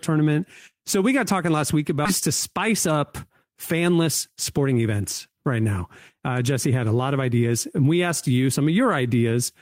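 At 2.05 s, right after "got talking last week", the speech jumps forward in a skip ahead. Roughly 400 ms of audio is simply gone, and the two sides are butted together with no silence or fill. The receiver discarded a stretch while later audio was already queued, cutting the delay by about that much. On a spectrogram the formant tracks and harmonics break off and restart at a different shape with no gap between. The waveform shows an abrupt splice.

From 2.27 to 4.08 s the talker sounds slightly hurried. This is jitter buffer speed-up: the buffer was holding more than its target, so short pitch-period chunks were trimmed repeatedly, playing at about 107% speed and removing roughly 150 ms. It happens again from 4.58 to 5.30 s, ending just before "right now", at about 110% with roughly 70 ms removed. Pitch stays the same, so harmonic spacing on a spectrogram is unchanged while syllables look compressed in time. 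The waveform shows many small periodic cuts.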